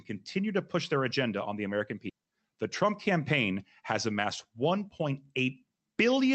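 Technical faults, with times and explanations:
2.09 s, skip ahead: about 0.7 s of speech is missing, and the audio on either side is butted together with no gap or fill. The waveform shows an abrupt splice, and the spectrogram shows harmonic and formant tracks breaking discontinuously at one vertical line.
2.19–3.57 s, jitter buffer speed-up: just after the skip, the receiver trims short pitch-period pieces repeatedly to shrink its backlog, removing around 70 ms. Speech runs about 105% fast at unchanged pitch and sounds slightly hurried. Syllables look compressed in time, with steady harmonic spacing.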